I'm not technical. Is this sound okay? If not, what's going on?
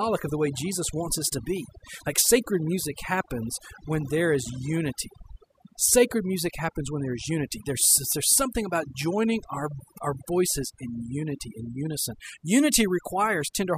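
No. Overdone noise removal affects the whole clip, start to finish. A noise-cleaning tool was pushed too hard, so it switched off quiet parts of the voice along with the background noise. That leaves near-silent gaps with twinkling specks.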